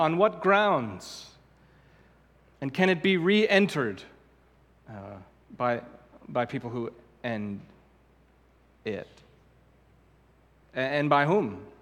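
No faults can be heard anywhere in this recording.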